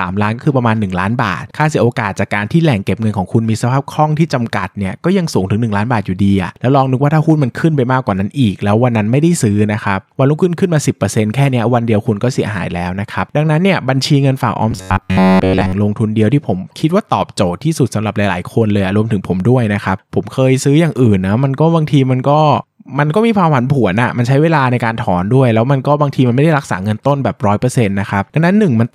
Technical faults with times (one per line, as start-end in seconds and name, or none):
14.71-15.73 robotic sound from repeated short buffers